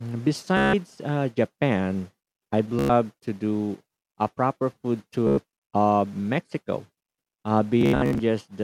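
Speech is interrupted four times by a short machine-gun buzz, at 0.57 to 0.73 s, 2.79 to 2.90 s, 5.27 to 5.38 s, and 7.81 to 8.19 s. This is Bluetooth stutter: packets dropped or arrived late, so the receiver looped its last small slice of audio until fresh data came. The speech then picks up further on, with about 160 ms, 100 ms and 100 ms missing, and in the final burst about 230 ms lost in scattered gaps, the longest near 73 ms.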